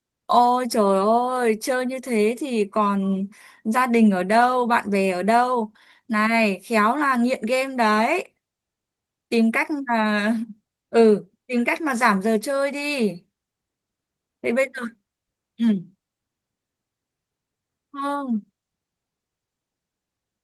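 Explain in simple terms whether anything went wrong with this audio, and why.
Nothing went wrong here.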